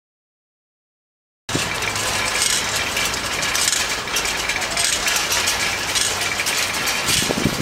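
From the opening until 1.49 s there is only digital silence, and then the sound jumps in abruptly, already mid-event, with no natural onset or fade-in. This is a cut-off start: capture began late, so the beginning of the sound was never recorded.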